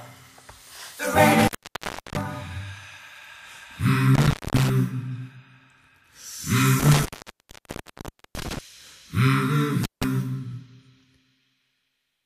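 A loose connection in the signal chain opened four times, an intermittent contact fault. Each time the sound cuts out, with crackle at the edges and faint hiss while the line is open: from 1.39 to 2.23 s (open about 675 ms), 4.15 to 4.70 s (about 240 ms), 6.80 to 8.59 s (about 1.3 s, the longest dropout), and 9.84 to 10.04 s (about 159 ms).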